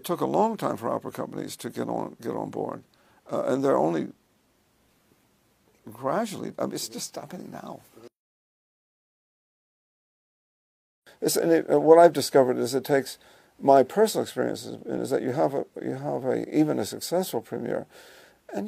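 At 14.98 to 15.01 s there is an overlap between stream segments. Two adjoining segments, each about 2 s long, claim the same stretch of time. The player trims that overlap from sound that was never doubled. About 36 ms vanishes, and the waveform jumps, giving a short skip.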